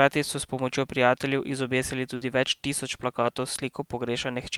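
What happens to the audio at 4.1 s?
Nothing goes wrong at 4.1 s; the audio is intact at that moment, with no dropout, click, distortion or other fault.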